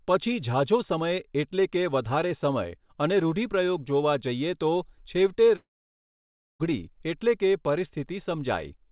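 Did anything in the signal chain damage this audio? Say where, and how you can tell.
Yes, a long network dropout from 5.56 to 6.61 s, likely packet loss. The speech fades into a brief buzz or hiss, then 0.94 s of silence. 1.04 s never returns.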